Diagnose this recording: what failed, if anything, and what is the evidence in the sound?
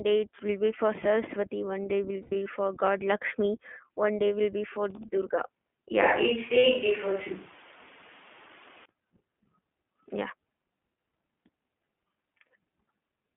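The whole clip went through the iLBC codec. Everything sits between 200 Hz and 3.4 kHz, and the voice has that plainly audible rough, synthetic edge. The band and texture fit iLBC's 15.2 kbps mode with 20 ms frames, where each frame's excitation is coded on its own.

On the network side there are lost iLBC frames. From 2.22 to 2.47 s the sound turns into a held, buzzy vowel-like tone as the decoder repeats the last pitch cycle with noise. About 160 ms is lost across that 240 ms stretch, with the longest run around a tenth of a second. A shorter 60 ms gap at 6.58 to 6.65 s does the same. Recovery is immediate each time.

From 6.02 to 8.86 s the voice goes suddenly roomy and hollow with thinner bass. The level stays about the same, and room noise comes up to roughly 25 dB below the speech. It snaps back just as abruptly. That points to a capture-side problem, likely a switch to a distant microphone while the close one dropped out.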